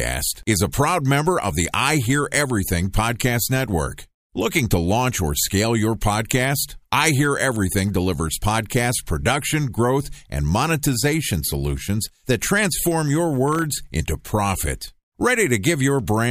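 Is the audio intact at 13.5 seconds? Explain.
No. From 13.48 to 13.62 s, between "solutions that transform your" and "into profit", there is processor overload crackle. The processor fell behind and missed a run of deadlines, about seven of them, on buffers of well under a millisecond. Each missed buffer became a sliver of silence with hard edges. Because these tiny gaps come in a rapid cluster, they sound like a short gritty tear riding on the speech, not like the single clean hole of one dropout.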